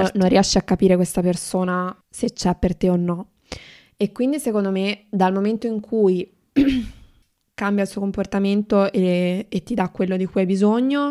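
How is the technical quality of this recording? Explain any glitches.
One glitch stands out in this speech recording: damaged data in the compressed stream at 7.22 s. At that point part of the encoded stream was corrupted, so the decoder misread the affected frame, lost its place in the bitstream and had to search for the next valid frame header before playback could continue. The result is a single brief, unnatural chirp or blip cutting into the speech.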